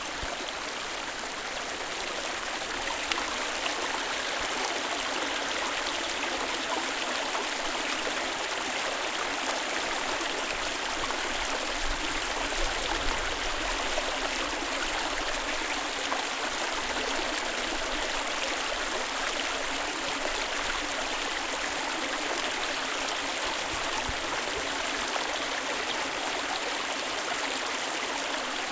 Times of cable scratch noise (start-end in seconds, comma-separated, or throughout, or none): none